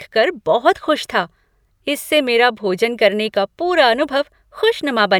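Nothing goes wrong anywhere in this speech recording, so there's no technical fault to point to at any moment.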